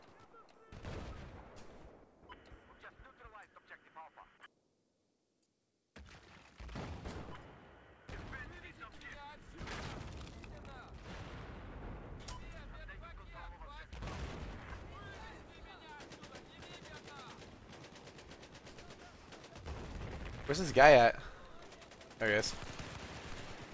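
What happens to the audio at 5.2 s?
Nothing goes wrong at 5.2 s: the audio carries straight through that moment, with only the steady band limit near 8 kHz that the call codec imposes throughout.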